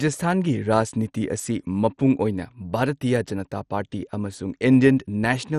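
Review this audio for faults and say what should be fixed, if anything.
Throughout the speech, the sound is dull, with a gurgling, granular roughness and nothing above 13.7 kHz. This is likely MP2 compression. Short of bits, at a rate that fits about 56 kbps, the encoder switches off its upper sub-bands and coarsely quantises the rest. Prevent it by re-encoding from the original at a higher bitrate or with a more efficient codec.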